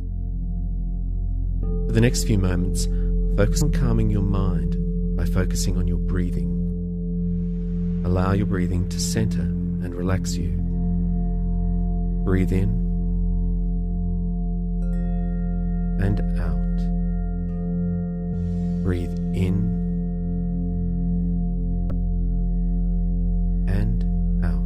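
You get four short chirps or blips at 3.60, 6.71, 18.32 to 18.34 and 21.90 seconds, all classic damaged data in a compressed stream: corrupted bytes make the decoder choke on those frames, lose sync and hunt for the next header.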